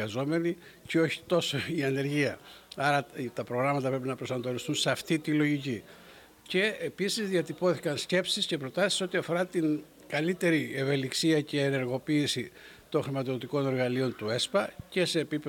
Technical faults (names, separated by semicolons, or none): none